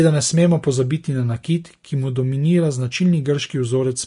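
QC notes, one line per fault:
Throughout: Vorbis compression. The speech is grainy and hissy, with a hard ceiling at 10.6 kHz, above which nothing remains. The damage is plainly audible and is likely from low-quality Vorbis encoding, which fits a bitrate around 35 kbps. At that rate the encoder trims the top band and quantises the remaining treble so roughly that fine detail is swapped for noise of similar energy, roughening tone and blurring consonant onsets.
1.43 s: pre-echo. A brief wisp of hiss arrives just ahead of a sharp onset, and the attack sounds softened and smeared rather than crisp. The codec spreads its quantisation noise evenly across a transform block. Here the attack sits late in the block, so noise scaled for the loud moment spills about 11 ms backward into the quiet gap before it, where nothing masks it.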